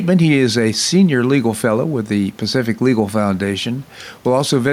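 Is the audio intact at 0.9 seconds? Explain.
No. At 0.9 seconds, as throughout the clip, there is gain pumping: the room noise, about 36 dB below the speech, swells in the pauses and ducks by roughly 5 dB under louder speech. Excessive input gain with a fast limiter reacting to each peak is the likely cause.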